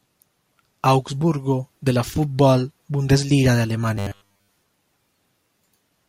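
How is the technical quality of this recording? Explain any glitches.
The recording has one glitch. From 3.97 to 4.60 s, the speech turns into robotic sound from repeated short buffers: a rigid, metallic buzz locked at 100 Hz that only loosely follows the speech. The likely cause is audio arriving too slowly, so the software fills the gaps by replaying a 10 ms slice, with most of that stretch repeated rather than new. Unlike a stutter or dropout, the repeats impose a buzz at a fixed rate.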